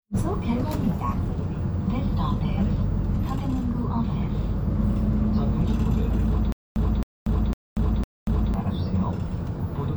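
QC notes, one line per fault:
6.52–8.54 s, stutter with silent gaps: playback likely stalled, and on each retry the player re-sent its last buffered fragment before running dry again. The same 267 ms burst of sound plays four times, each followed by about 237 ms of dead digital silence, so it repeats on a steady cycle of roughly 0.5 s. Whatever audio belonged in those two seconds is lost rather than delayed.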